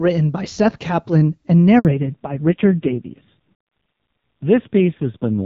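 The call is handed from one network to another at 1.79 s, and no speech frames arrive while the link switches. This handover gap leaves the speech clip silent for 60 ms, until 1.85 s. The voice dies away within a few tens of milliseconds, and whatever was said in that stretch is simply missing. When audio resumes at 1.85 s, the call has also dropped out of HD Voice into a fallback to narrowband. Before the gap, the sound is clear and reaches up to about 7 kHz, with only light artefacts from the AMR wideband (HD Voice) codec, which fits a rate around 12.65 kbit/s. From 1.85 s to the end, nothing above 4 kHz remains. The speech turns dull and boxy, losing the crispness of its sibilants, and it gains a rough, buzzy grain. That pairing of a hard 4 kHz ceiling with coarse texture points to narrowband AMR at a low rate, around 5.9 kbit/s.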